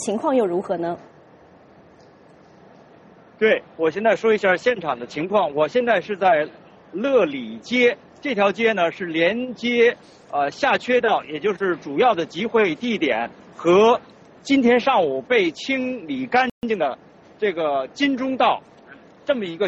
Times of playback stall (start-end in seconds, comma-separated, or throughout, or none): 16.50-16.63